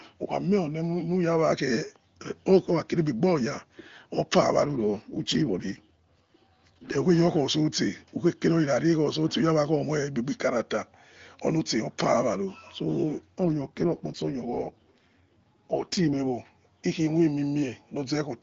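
From 4.66 to 6.98 s and again from 13.45 to 16.20 s, the speech turns rougher and more synthetic, with no gap and no loss of band. This is an AMR rate drop in the AMR-WB (HD Voice) codec, which fits a step down from 23.85 to 8.85 kbit/s.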